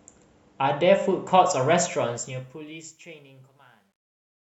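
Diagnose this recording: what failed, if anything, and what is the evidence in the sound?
A gain or sample-format conversion stage that applied the fade-out kept too few bits and added no dither, so truncation distortion on a fade appears from 1.84 s to the end at 4.59 s. As the speech fades, its low-level detail collapses onto coarse steps, which fits a path holding about 11 bits. From 3.03 s to 4.59 s the tail turns gritty instead of thinning out cleanly.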